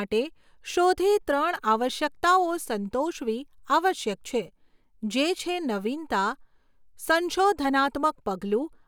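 A speech recording with no technical fault to point to. Nothing in it calls for a time or a cause.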